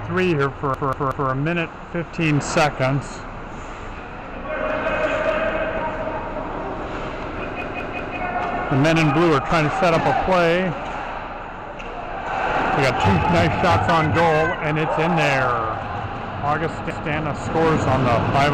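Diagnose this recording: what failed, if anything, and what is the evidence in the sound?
Repeated buffer, at the driver stage. A 186 ms chunk stutters at 0.74–1.30 s, 7.62–8.17 s and 16.90–17.09 s. Data arrived late, so the last buffer replayed.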